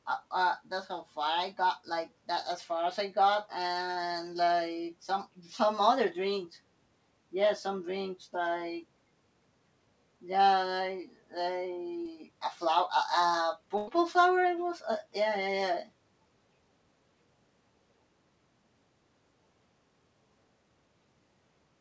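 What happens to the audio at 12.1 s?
Just before 12.1 s, from 12.02 to 12.06 s, there is a short concealed packet loss. About 40 ms of the call arrived too late for the decoder, and the receiver covered roughly 37 ms of it by extending the preceding sound, carrying its pitch or its noise forward before blending back into the real signal. It comes across as a brief smear or wobble rather than a gap of silence or a hard click, which is what separates it from a plain dropout. Throughout, the sound stops at 8 kHz, which fits the G.722 wideband call codec.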